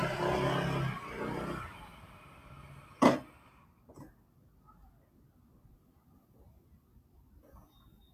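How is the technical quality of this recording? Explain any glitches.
The recording is compromised by one fault running its full length. A noise suppressor applied to sounds is active throughout: a processor tuned for speech treats sustained tones, ambience and decay as noise, dipping them by around 10 dB while onsets pass, so the audio pumps, flutters and sounds thinned.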